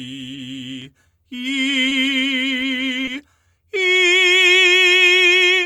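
At 1.89 to 1.93 s and 3.05 to 3.09 s, short concealed packet loss: 20 ms went missing and was filled by extending the preceding music, giving a brief smear rather than a silent gap.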